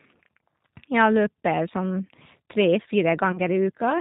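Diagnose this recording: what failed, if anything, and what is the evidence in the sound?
Throughout, the speech sounds rough and slightly synthetic, with nothing above 4 kHz, the plainly audible damage of a G.729 codec at the codec stage. Each 10 ms frame is rebuilt from a vocal tract filter, a pitch estimate and a few pulses, which fits 8 kbit/s G.729A.

From 3.32 to 3.40 s the sound smears into a brief, fading stretch, then recovers weakly. This is VoIP packet loss concealed by the speech codec at the network stage: about 20 ms was missing, fitting two lost frames, and the decoder extrapolated from its last pitch and filter.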